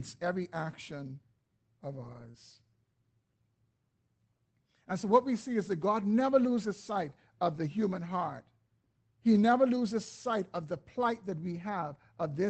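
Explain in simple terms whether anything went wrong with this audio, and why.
Yes, a couple of things went wrong, both from bits of the call going missing on the way.

The first is a lost packet rebuilt from error correction. From 2.03 to 2.29 s, right after "every action of", a stretch of audio didn't arrive. The packets that followed carried rough backup copies, and the decoder played those instead. So there's no gap, but that quarter-second sounds grainier and noisier. The same thing happens briefly at 7.55 s, between "never loses sight of" and "the human heart".

The second is a short concealed packet loss. Just after the first patch, from 2.31 to 2.35 s, about 20 ms had no backup copy at all. The receiver filled the hole by stretching out the sound it had just played, then blended back in, so you get a tiny smear or wobble there.

The call codec's usual coding fuzz sits under all of this.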